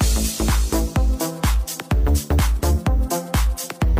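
No technical faults are audible.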